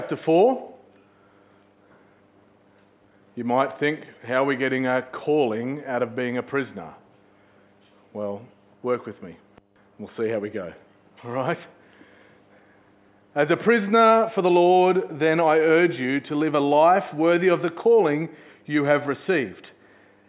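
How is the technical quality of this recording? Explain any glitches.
Nothing to flag: no glitches or technical faults are audible anywhere in the recording.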